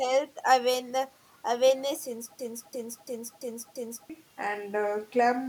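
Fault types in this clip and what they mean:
System hang loop: a machine-gun stutter from 2.39 to 4.10 s, one 341 ms piece repeating about three times a second; the frozen system left the hardware cycling a 16384-sample buffer.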